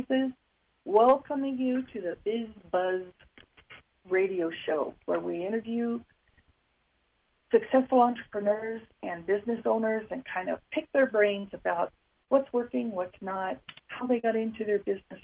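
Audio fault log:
11.40 s, 12.23 s, 14.19 s: short concealed packet loss. Brief smears where roughly 40 ms went missing and the receiver stretched the preceding sound before blending back.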